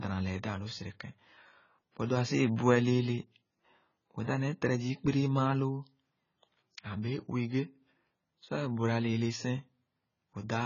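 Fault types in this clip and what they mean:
AAC compression: the speech sounds dull and smeared all the way through, with nothing above 7 kHz and a heavy warbly, fizzy texture on sustained sounds and sibilants. That's likely AAC-LC squeezed to a very low bitrate, around 16 kbps.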